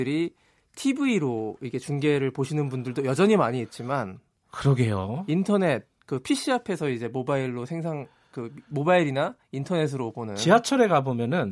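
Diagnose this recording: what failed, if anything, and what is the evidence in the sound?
Nothing failed: no stage of the chain leaves an audible mark anywhere in this speech recording.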